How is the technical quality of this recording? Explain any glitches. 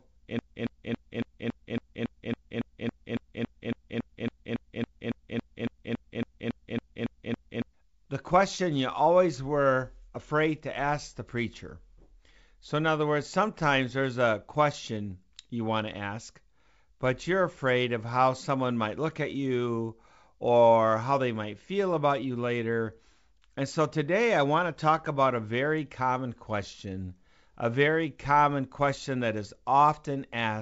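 The recording has one serious glitch near the start. From 0.39 s to 7.74 s there is a broken-record loop: a 0.28 s fragment repeats exactly, back to back, 26 times. The likely cause is a stalled player or stream resending its last buffered piece, so the original audio from that stretch is lost. Normal playback resumes with "the question you always". The G.722 wideband coding keeps the speech band-limited to about 7 kHz.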